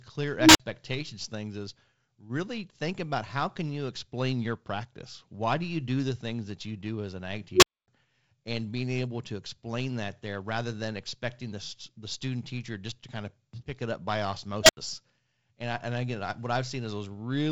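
Unstable filter bursts at 0.36 s, 7.54 s and 14.63 s: a recursive filter whose feedback exceeds unity rings ever louder. Each is a low beep, around 300 Hz, then 400 Hz, then 700 Hz, that swells over 186 ms, 89 ms and 61 ms respectively until it clips and the numbers overflow. The audio then drops out for 46 ms, 255 ms and 81 ms while the filter resets. Around these, the band ends near 7.8 kHz with slight coding noise, which fits G.722 wideband telephone coding at 48 kbit/s.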